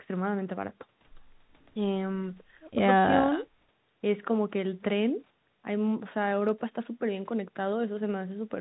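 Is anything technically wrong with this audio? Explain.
No, nothing stood out on listening to this speech beyond the narrow band you would expect from an ordinary telephone call.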